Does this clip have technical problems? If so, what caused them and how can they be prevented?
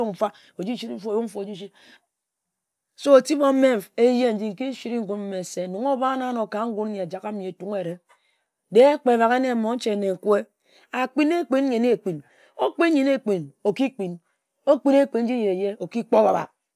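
No, there are no technical faults in this speech recording. Nothing needs to be prevented or corrected.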